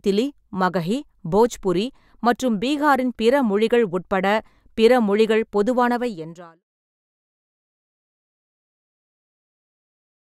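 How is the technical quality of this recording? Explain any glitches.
Nothing here counts as a glitch: the speech just eases out with a smooth fade that begins at around five and a half seconds and is gone by 6.64 s, the gentle sort of ending an editor would put on deliberately.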